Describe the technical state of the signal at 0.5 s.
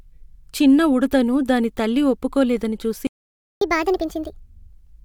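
At 0.5 s the speech signal is intact, with no audible fault at that moment.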